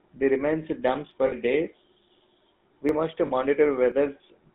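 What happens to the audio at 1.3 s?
Right after "they remain damp", from 1.26 to 1.34 s, the sound briefly freezes into a rough, metallic ring instead of moving on. These are lost GSM frames. About 60 ms of data failed to arrive, which fits three 20 ms frames. The decoder bridged the gap by reusing the settings of the last good frame, so the previous sound is smeared across the gap rather than cutting to silence.

That moment also carries the plainly audible GSM full-rate codec damage present throughout the clip, a buzzy, gravelly roughness. The codec models the vocal tract and drives it with sparse, regularly spaced pulses at 13 kbps. The line band limits the sound to about 200 Hz to 3.6 kHz, so it sounds thin.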